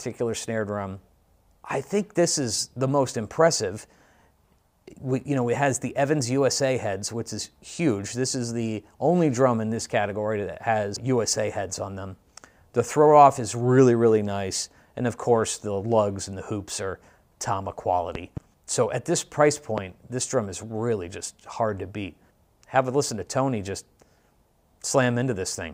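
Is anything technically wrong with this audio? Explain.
Yes, there are two loud pops. A double pop falls between 18.15 and 18.40 s, peaking around 10 dB above the sound. A single, stronger one falls at 19.78 to 19.80 s, around 15 dB above. Each is likely a sudden voltage pulse, such as a plug, switch or static discharge, shaped by the circuits downstream. They are heard as sharp thumps over audio that continues beneath. On a waveform they show as tall narrow spikes, and on a spectrogram as thin vertical broadband lines.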